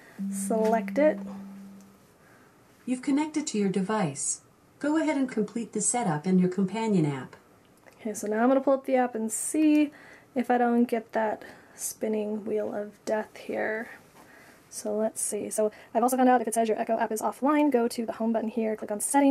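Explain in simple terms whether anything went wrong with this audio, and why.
From 15.01 s to the end at 19.31 s, there's a time-stretched section. The sound suddenly runs about 1.73 times faster, rushed, while the pitch stays the same. Software likely squeezed it to fit a set length.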